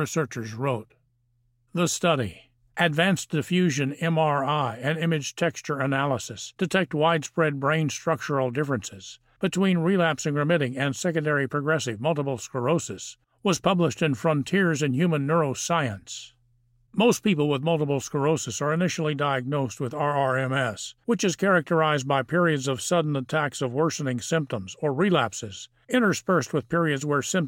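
No technical faults can be heard anywhere in this recording.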